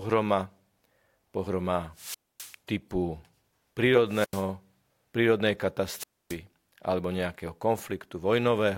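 Speech with three wireless microphone squelch dropouts, at 1.94–2.57 s, 4.07–4.47 s and 5.95–6.38 s (before "alebo nejakého"). The FM signal fades, hiss rises, then the receiver's squelch mutes for about 258, 88 and 272 ms. A spectrogram shows broadband noise, then blank gaps.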